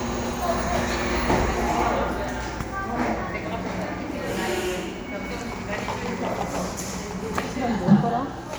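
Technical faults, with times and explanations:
No technical faults can be heard in this recording.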